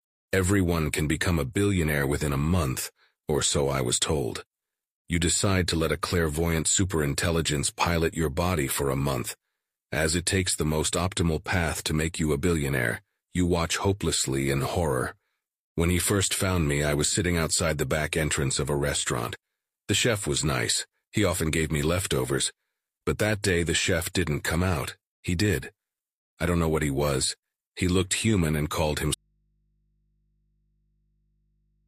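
At 29.15 s the speech cuts off abruptly and does not return; from there to the end only a low mains hum remains, some 45 dB below the speech. It is a clear audio dropout to a faint residue, not a pause or fade. The likely cause is that the wanted signal was lost partway along the chain while the stages after the break stayed live, so their open input kept passing hum.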